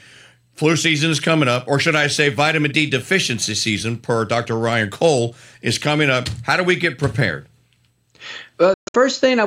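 Near the end, from 8.74 to 8.95 s, the speech breaks up into abrupt holes, the longest about 131 ms, with roughly 189 ms missing in all. It's likely a Bluetooth dropout: a burst of packets arrived too late, and playback resumes further along as though it never paused.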